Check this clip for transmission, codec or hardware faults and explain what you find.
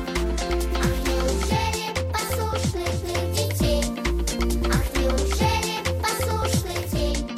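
One fault is present: digital radio blending to analogue, from 2.78 s to 7.07 s. The receiver lost its digital stream and cross-faded over 488 ms to the station's FM broadcast, then returned to digital at the end. During the FM stretch, a hiss floor rises to roughly 30 dB below the signal and the level shifts by about 1 dB.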